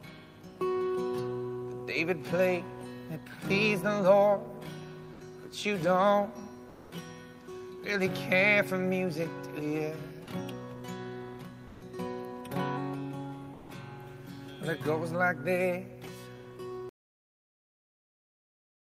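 From 6.69 to 6.91 s and 13.53 to 13.69 s, the background turns flat and featureless, about 2 and 3 dB quieter: comfort noise in place of the background, likely Opus DTX synthesising noise during pauses. At 16.89 s the sound stops abruptly into digital silence with no decay, a cut-off end where the final buffers were never written.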